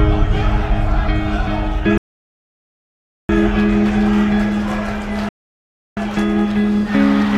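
Two rebuffering stalls occur, at 1.98 to 3.29 s and 5.29 to 5.97 s. In each, the player's buffer emptied, so the sound drops to silence and then resumes exactly where it stopped. Nothing is skipped, but about 1.3 s and 0.68 s are added.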